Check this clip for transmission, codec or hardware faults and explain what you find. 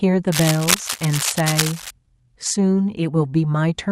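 From 0.32 to 1.91 s, a dense, uneven scratching and rustling sits over the speech, only a little quieter than the speech itself. This is cable scratch noise, likely from a worn cable or connector being moved, its contact resistance jumping rapidly and injecting bursts of noise.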